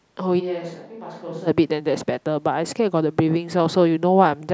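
From 0.41 to 1.46 s the speech turns abruptly roomy and hollow, thinner in the bass and around 10 dB quieter, with faint background noise underneath, then snaps back. This is likely a switch to a distant microphone. Unlike a simple level dip, the tone and room sound change too.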